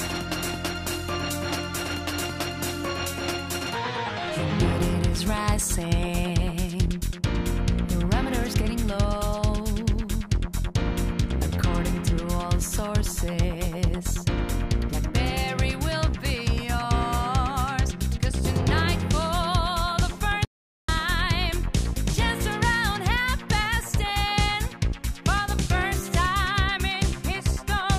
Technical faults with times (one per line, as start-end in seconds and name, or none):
20.45-20.88 audio dropout to silence